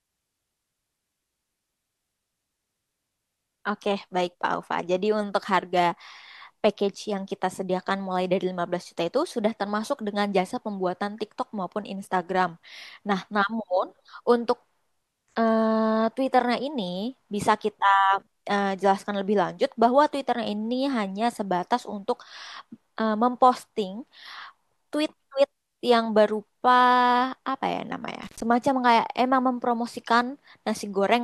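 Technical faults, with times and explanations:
28.23–28.42 s, intermittent contact: the speech drops out abruptly for about 105 ms inside this window, with a burst of crackle as the signal breaks and again as it returns. A loose plug or cable conductor briefly lifted off its mating surface, opening the circuit. While the connection was open a faint hiss remained, and the scratchy edges come from the contact chattering as the metal surfaces separated and then re-seated.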